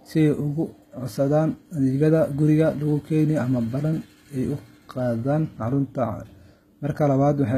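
Speech with plainly audible codec damage running through the whole clip, most likely HE-AAC compression at a low rate, with the artefacts pointing to something around 20 kbps. The upper spectrum is rebuilt by spectral band replication rather than coded directly, so the treble sounds synthetic: sibilants come out gritty and lispy, and the copied harmonics fail to line up with the real ones below the crossover. Nothing is present above 14.9 kHz.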